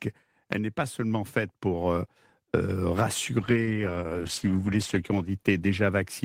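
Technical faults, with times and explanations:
0.53 to 2.04 s, automatic gain rising: The level climbs by about 4 dB over roughly a second and a half, and the voice and the room noise behind it come up together. That joint swell is the giveaway. The gain control decided the input was too quiet and eased its gain upward, lifting everything it was fed rather than just the talker.
3.41 s to the end, call bitrate drop: From here the voice goes rough and a bit watery, and the top end dulls. That points to the encoder being cut from around 32 kbps to something nearer 12 kbps after the bandwidth estimate fell. At that rate the codec quantises more coarsely and trims the highs. It sits at its worst for about 1.44 s and doesn't recover before the clip ends.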